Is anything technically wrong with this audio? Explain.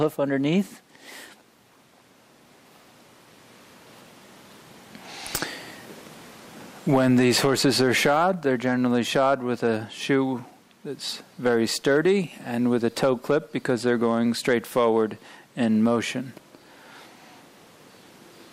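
Yes. Hard clipping occurs in five stretches: 0.02 to 0.06 s, 6.92 to 9.68 s, 11.46 to 12.12 s, 12.73 to 15.02 s, and 15.65 to 15.96 s. The signal is overdriven by about 2 dB in the first, third and fifth and about 3 dB in the second and fourth, so the peaks are cut flat. The waveform shows squared-off tops, and the spectrogram shows harmonics reaching far up the spectrum. It sounds like crackle or fuzz on the peaks.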